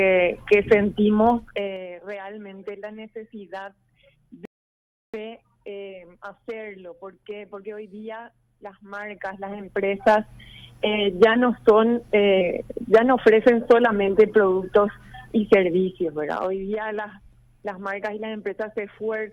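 From 1.30 to 1.86 s the level drops with a fast ticking, a zipper noise of roughly ten small clicks a second. The gain moves in steps of about 3 dB with no smoothing, for a fall of around 20 dB. At 4.45 s the sound cuts to silence and picks up at 5.14 s exactly where it left off. This is a rebuffering stall: the player ran out of downloaded audio and waited, adding 0.68 s without losing anything. The same zipping returns from 8.86 to 10.25 s as the level climbs by around 20 dB, and again from 15.54 to 16.57 s as it falls by about 10 dB. Both times the steps are about 1 dB, at roughly ten a second.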